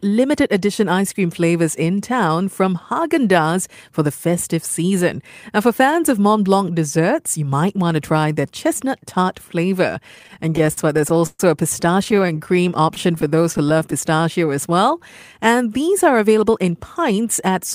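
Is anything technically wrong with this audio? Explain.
Yes, the speech has network delivery problems in its last few seconds.

Repeated stalls (stutter) occur from 10.15 to 11.40 s, right after "their chestnut tart flavor", then 12.04–12.55 s and 12.95–13.93 s. The jitter buffer kept running dry, so the receiver stretched the last sound to fill the gaps. The first stretch is the worst, with 17 gaps, one lasting 128 ms.

Jitter buffer slow-down happens at 12.37–12.83 s and 14.10–14.75 s. Repeated pitch periods rebuild the buffer, so speech drags at 87% and 91% speed with the pitch unchanged.

Jitter buffer speed-up runs from 16.49 to 17.56 s, after "these are". Trimmed pitch periods cut about 50 ms of excess delay, making the speech run slightly fast at 104% speed with the pitch unchanged.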